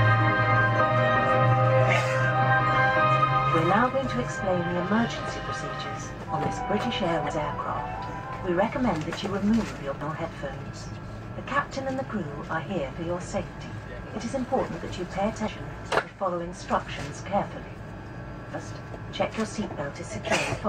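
At 7.29 to 7.31 s there's a short burst of damaged data in the compressed stream, and the same thing happens again at 10.01 s, 15.47 s and 18.53 s. Each time, a stretch of the encoded bitstream arrives wrong, so the decoder misreads those frames, loses sync and has to search for the next valid frame header. You hear each one as a quick chirp or blip, roughly 20 ms or less, cutting briefly across the sound.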